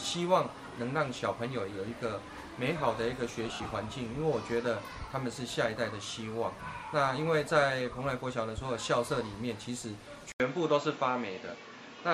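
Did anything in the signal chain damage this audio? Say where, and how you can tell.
Yes. Between 3.49 and 3.71 s there are lost LE Audio frames on the Bluetooth link. About 110 ms of audio drops out, scattered across 220 ms, with the longest gap around 70 ms. The LC3 decoder's concealment repeats the last spectrum with scrambled phase, so the sound smears into noise and fades during the longer run.

From 10.32 s to the end, the character changes after an 80 ms silence. Nothing remains above 7.6 kHz, and a new noise floor sits about 35 dB below the signal at much the same level. This likely comes from the input being switched to a poorer device at the driver or routing stage.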